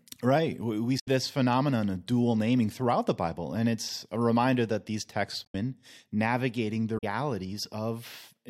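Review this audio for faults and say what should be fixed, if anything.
Damaged data in a compressed stream causes three short glitches in this speech: 0.96 to 1.08 s, just before "phenomenon of dual naming"; 5.42 to 5.55 s, right after "reminder that these texts"; and 6.94 to 7.04 s. Each lasts about a tenth of a second and sounds like a chirp, squawk, click or short hole. Corrupted bytes make the decoder misread those frames and lose sync until it finds the next valid frame header. Re-fetch or re-encode from an intact source, and transfer with checksums so damaged frames are caught before playback.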